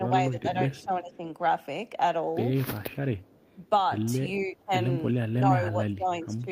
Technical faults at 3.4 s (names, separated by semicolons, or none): echo leak